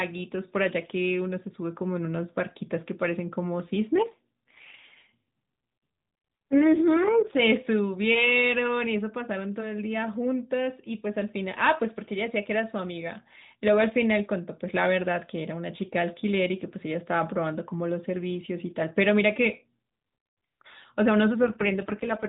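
From 3.98 to 7.41 s, and again from 21.42 s to the end at 22.29 s, the speech turns rougher and buzzier, with a synthetic edge. It sounds like an AMR rate drop, which fits the mobile link falling from 12.2 to 4.75 kbps. On a spectrogram the 4 kHz ceiling stays put and the waveform shows no gap. Harmonics smear into coarser, blotchier bands until the rate recovers.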